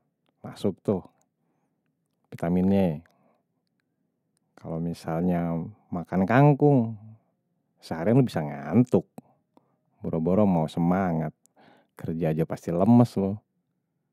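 No technical fault can be heard anywhere in this speech recording. Nothing in the audio calls for comment at any point along its course.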